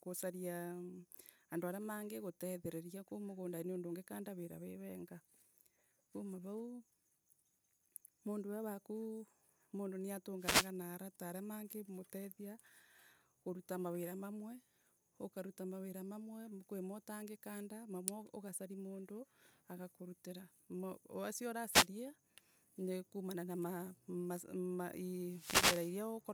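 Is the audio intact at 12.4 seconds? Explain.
Yes, the audio at 12.4 seconds is intact, with no audible fault at that moment.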